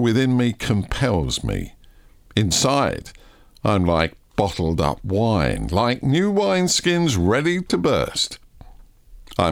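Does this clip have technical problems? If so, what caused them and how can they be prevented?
No, nothing stood out as a technical problem on listening to this speech clip.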